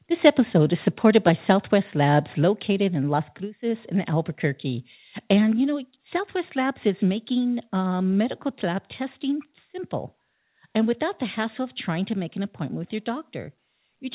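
In this speech recording, the level drops abruptly three times, at 2.43 s by about 3 dB, then at 3.45 s and 5.52 s by about 2 dB each. These steps are likely the microphone volume stepped down by automatic input-gain control in the call, heard through a narrowband path with nothing above 4 kHz.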